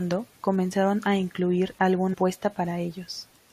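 At 2.13 to 2.15 s, right after "comenzaron a incluir", the speech jumps forward abruptly with a brief blip at the join. This is likely a stream segment skipped: one segment of the stream failed to load, so playback resumed at the following segment and that stretch of programme is missing.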